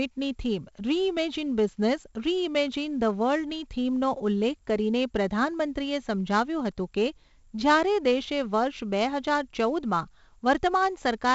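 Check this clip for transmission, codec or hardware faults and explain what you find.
One codec fault runs through the whole speech clip. For all of it, a gritty hiss rides on every loud syllable and rises and falls with the voice. Sharp onsets come out rough and distorted, and nothing is present above about 7.7 kHz, so the sound is dull. This is heavy 4-bit ADPCM compression. Each sample is coded as a coarse 4-bit step from a predicted value, and the step size adapts too slowly for sudden attacks. The bandwidth limit suggests a sample rate near 16 kHz, which would put the stream at around 64 kbps.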